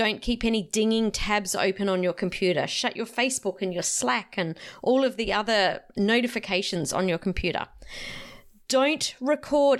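Nothing in this speech recording stood out as a technical problem on listening.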